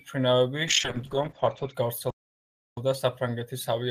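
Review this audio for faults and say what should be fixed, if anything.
From 0.68 to 1.80 s, a call bitrate drop turns the speech rough and muffled, with the top end cut from 20 kHz to 8 kHz. This fits an encoder squeezed from about 32 to 14 kbps. Unlike packet loss, nothing drops out. Prevention: cap how fast the bandwidth estimate can fall, and keep a higher bitrate floor.

From 2.10 to 2.77 s, a playback stall silences the sound for about 0.67 s, likely because the player's buffer ran dry. Unlike a dropout, it comes as one clean gap before resuming. Prevention: enlarge the playback buffer and keep the audio thread from being blocked.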